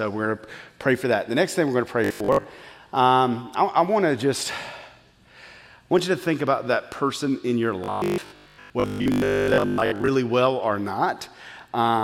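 From 2.04 to 2.44 s and again from 7.84 to 10.10 s, robotic sound from repeated short buffers replaces most of the audio with a rigid 50 Hz buzz, likely from repeating 20 ms chunks. The spectrogram shows evenly spaced harmonic stripes, and the waveform shows identical repeating cycles.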